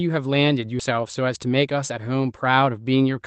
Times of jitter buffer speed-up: 0.91-1.98

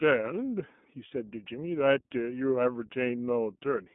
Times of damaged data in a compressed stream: none

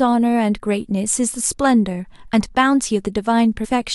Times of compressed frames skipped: 3.63-3.66

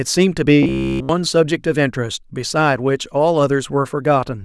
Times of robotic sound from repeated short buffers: 0.63-1.09

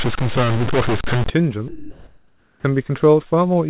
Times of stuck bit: 0.00-1.30

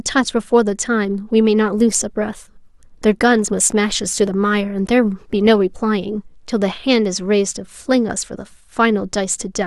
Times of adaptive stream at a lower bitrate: 1.76-5.76

